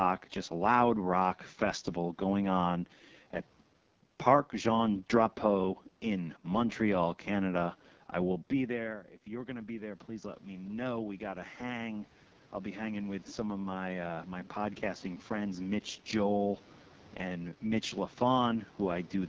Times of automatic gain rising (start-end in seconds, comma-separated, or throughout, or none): 8.67-15.94